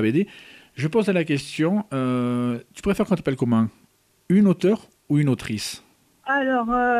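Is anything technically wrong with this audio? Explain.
Yes, there are two spots where chunks play out of order. From 1.53 to 1.57 s, a 10 ms chunk turns up three chunks late, and from 5.62 to 5.64 s another lands one chunk late. The chunk got delivered or written after its successors, so nothing's missing, but the sequence is shuffled and each swap leaves three hard joins. You hear a brief jumbled smear, a bit longer at the first one.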